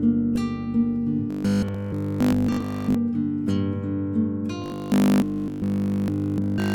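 Robotic sound from repeated short buffers at 1.31–2.95 s and 4.62–6.74 s: a rigid 50 Hz buzz replaces the audio, likely from a 20 ms buffer being looped continuously.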